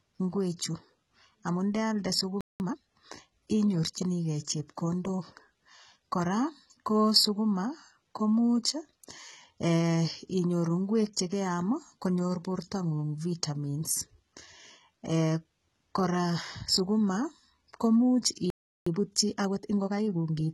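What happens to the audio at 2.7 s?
The player had stalled and was working through its backlog, so from 2.6 to 2.78 s, just after "amu ndealde", a time-compressed catch-up cuts small pieces out of the stream and cross-fades the remainder together. For those 0.18 s the speech runs at about twice its normal speed. Because segments are removed rather than resampled, the pitch stays where it was while the delivery sounds rushed.

The same moment also carries damage that runs through the whole clip, most likely from HE-AAC compression. The codec stores only the lower spectrum and rebuilds the treble by spectral band replication, copying lower bands upward under a coarse envelope. The damage is heavy, which fits a very low bitrate of around 16 kbps. The rebuilt treble sounds gritty and metallic, with s sounds coming out lispy because their harmonics do not line up across the crossover.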